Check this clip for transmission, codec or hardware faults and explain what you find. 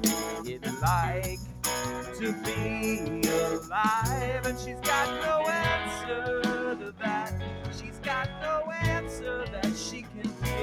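There's one real problem here: a speech noise suppressor left running on material it wasn't built for.

Noise suppressor applied to music or sounds: throughout, it treats steady content as noise, so levels pump and thin by about 10 dB as held parts sink and attacks get through.

Sound cut by the noise suppressor: at 1.37–1.63 s, 6.77–7.01 s, 7.55–8.06 s and 9.95–10.42 s, sustained sound dips by about 7–8 dB, cutting decays short for a fraction of a second.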